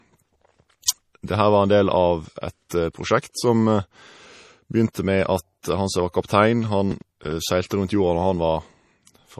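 From start to finish the speech stops dead at 14.8 kHz, a flat ceiling across the spectrogram, with smeared, watery detail beneath it. This is low-bitrate audio saved at a high bitrate. The sound points to a likely low-rate MP3 at around 40 kbit/s later re-saved as a much larger MP3, which cannot restore what was removed.

From 6.91 to 7.32 s, processor overload crackle tears through the sound. The processor repeatedly missed its deadlines for buffers of around ten milliseconds, several in a row, replaying stale audio each time. The waveform shows short repeated slices joined by abrupt steps, and the spectrogram shows thin vertical broadband streaks.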